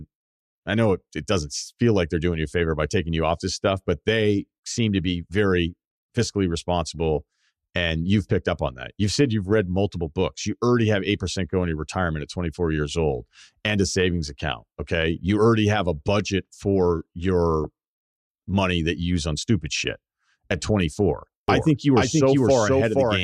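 At 3.66 to 3.71 s, just after "taking you off this" and before "but they seem to", a brief burst of burbling cuts across the speech. The same burbling returns from 6.94 to 7.03 s after "to be very fiscally", and again at 17.64 s, where it hits 11 frames. This is DAB burbling: weak reception let a few tenths of a percent of bit errors slip past error correction into the MP2 stream, corrupting samples so individual sub-bands carry short blips of noise.

From 21.48 s to the end, the speech is heard twice, with a second copy about as loud as the first trailing roughly half a second behind. The copy comes in abruptly, spans the full frequency range, and has no decay or room colour, so it sounds like a stray duplicate rather than an echo. This doubled audio track is likely the result of the signal being captured again through a slower path and mixed back in.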